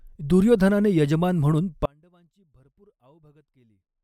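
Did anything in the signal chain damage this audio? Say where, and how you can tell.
Yes. At 1.86 s the speech suffers an audio dropout to a faint residue that lasts to the end of the clip: the level falls abruptly, not as a fade, leaving only a faint leak of the signal, roughly 35 dB below normal. The likely stage is the analogue wiring, where an intermittent connection drops the wanted signal while the path stays live. On a waveform the envelope shrinks to a thin trace; a spectrogram shows a sharp vertical edge, then faint energy.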